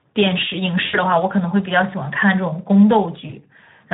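Speex codec damage runs through the whole clip. The speech is coded with too few bits for the excitation signal, so it sounds hoarse and grainy. The degree of coarseness fits a Speex mode of around 11 kbps.

VoIP packet loss concealed by the speech codec occurs from 0.85 to 0.98 s. The decoder repeats its last pitch and filter settings while lowering the gain, so the speech smears into a fading buzzy tone or coloured noise. The gap fits about four lost 20 ms frames, and the speech stays weakened briefly afterward.

A shorter concealment follows from 3.27 to 3.33 s. It matches a single lost 20 ms frame, with a brief stretch of buzzy tone or coloured noise and a dip in level before the speech recovers.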